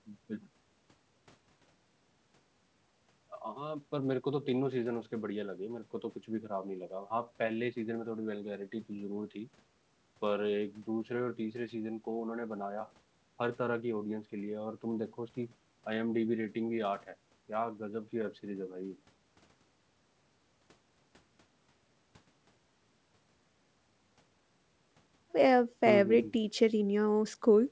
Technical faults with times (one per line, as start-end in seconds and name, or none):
none